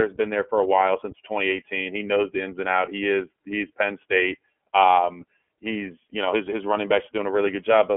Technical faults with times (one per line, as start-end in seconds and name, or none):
0.00-7.97 iLBC codec